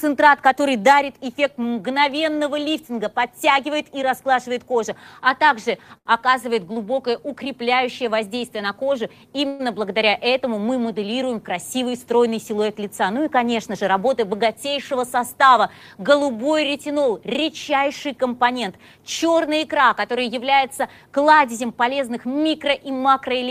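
At 5.97 s a sound is held for about 81 ms too long, with a slight buzz or dip, before the audio carries on unbroken. This is a short stall from a late packet: the jitter buffer ran dry, so the receiver stretched the last sound until the packet turned up.

From 9.47 to 9.61 s the audio hangs as a fading buzz or hiss for about 119 ms, never dropping to silence, then resumes from where it stopped. This call audio freeze was likely caused by packets held up in transit emptying the jitter buffer, with the receiver filling the wait.

Between 13.27 and 15.50 s the audio runs about 5% fast at unchanged pitch, sounding slightly hurried. This jitter buffer speed-up came from the receiver trimming repeated pitch-period-sized slices, about a tenth of a second in all, to shed excess buffered delay.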